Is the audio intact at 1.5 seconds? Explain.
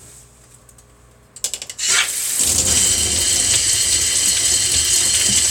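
No. From 1.38 to 1.91 s there is a drift correction step. Clock-matching software likely slowed playback in one jump to refill its buffer, running about 5.7% slow before restoring the normal rate. Speed and pitch fall together, so for about half a second the sound drops roughly 101 cents, about a semitone flat, and plays slower. At 1.91 s both snap back to the original tuning and pace.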